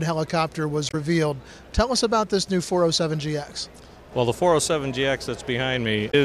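At 0.88 to 0.94 s, and again at 6.08 to 6.15 s, there is damaged data in the compressed stream. Corrupted bytes make the decoder misread frames and lose sync while it hunts for the next header. Each is heard as a brief chirp, squawk, click or short hole.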